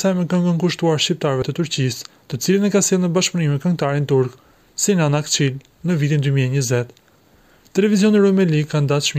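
At 1.42 s, audio missing between chunks: roughly 50 ms drops out with no gap, likely from a 3 s chunk boundary, showing as an abrupt waveform discontinuity.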